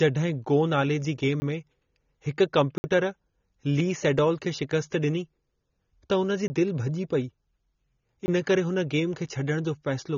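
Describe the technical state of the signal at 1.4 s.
Just after "गो नाले जी गेम", a block of digital silence spans 1.40 to 1.42 s. The sound cuts to silence for 20 ms without fading, leaving a short hole. The sound there is also dull and smeared, with nothing above 6.9 kHz. That likely comes from AAC compression at a low bitrate, fitting about 24 kbps.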